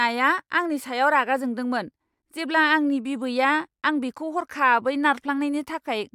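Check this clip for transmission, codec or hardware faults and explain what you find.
No transmission, codec or hardware faults.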